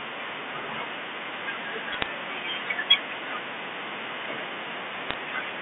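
From 1.9 to 2.06 s, a burst of sharp ticks crackles over the speech. These are bit errors on a digital phone line. Single bits in the stream were flipped, and each flip corrupted one sample. Flips in the sign or high bits jump the waveform, giving a click. The error rate here is a few in a thousand bits. A shorter, sparser crackle returns from 5.10 to 5.14 s. The underlying telephone-band sound, roughly 150 Hz to 3.6 kHz, stays intact.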